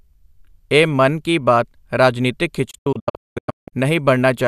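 The receiver lost a run of digital frames and muted them in this speech recording, a digital broadcast dropout. Just after "ਮਨ ਕੀ ਬਾਤ ਰਾਜਨੀਤਕ", from 2.71 to 3.73 s, the sound fades out over 8 ms into repeated silent holes, the longest 192 ms, losing 720 ms of programme in all.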